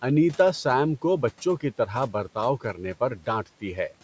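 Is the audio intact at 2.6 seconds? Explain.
No. Speech cut by the noise suppressor runs from 2.61 to 2.95 s, just after "بچوں کی طرح برتاؤ". The suppressor mistook part of the speech for background noise and pulled it down along with the room noise, by about 9 dB at its deepest. Roughly a tenth of a second in total is affected, so the speech caught in that span sounds swallowed and faint rather than cleanly cut off.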